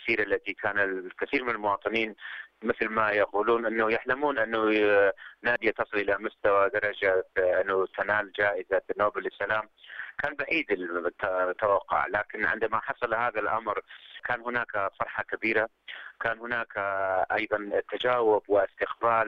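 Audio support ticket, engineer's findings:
Skip at 1.33 s, audio jumps ahead with no gap. Likely dropped buffer (overrun): capture side failed to read before hardware overwrote the block, roughly 10 ms lost, ends spliced directly. Waveform: abrupt step discontinuity. Spectrogram: thin full-band vertical line.

Second skip at 5.56 s, larger jump, around 30 ms skipped, likely same mechanism. Waveform: sharp discontinuity, content on either side misaligned. Spectrogram: broadband vertical stripe with visible break in ongoing patterns.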